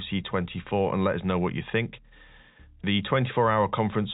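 No technical faults can be heard in this speech.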